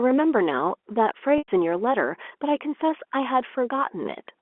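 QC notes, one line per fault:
1.38–1.48 s, packet loss with pitch repetition: 100 ms of audio is lost, which fits five 20 ms packets. The receiver repeats the last pitch period to fill the gap. It sounds briefly held and buzzy, then fades before the speech resumes.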